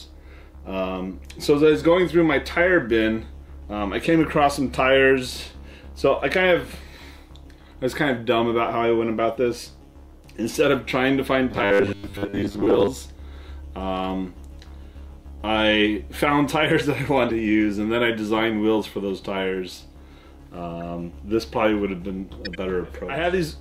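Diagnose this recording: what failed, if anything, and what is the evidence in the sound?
At the driver or buffer stage, sound from 11.52 to 12.89 s collapses into a rigid, metallic 100 Hz buzz, likely robotic sound from repeated short buffers. Roughly 10 ms chunks replay in place of most new audio. A spectrogram shows evenly spaced harmonics at 100 Hz multiples. The waveform shows identical repeating cycles.

At the codec stage, corrupt frames were decoded, giving short chirps or noise bursts at 11.86 to 11.91 s, 17.29 to 17.31 s, 20.81 s (faint) and 22.45 to 22.55 s (longest, spanning several frames). Each appears as a brief vertical smear of misplaced energy and a small waveform blip.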